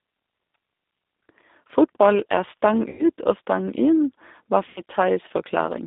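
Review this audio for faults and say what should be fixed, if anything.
G.729 codec throughout the speech: the band runs only from 250 Hz to 3.7 kHz and the voice sounds rough and synthetic, consistent with an 8 kbit/s stream rebuilt from filter, pitch and pulse parameters.

VoIP packet loss concealed by the speech codec at 2.89 to 3.05 s and 4.70 to 4.80 s: about 100 ms and 60 ms of audio were lost. The decoder stretched the last sound into a fading buzzy tone or coloured noise, and the voice stays weak briefly afterwards.

To prevent both, use a wideband codec at a higher bitrate on a network path with less loss, or add forward error correction and a larger jitter buffer.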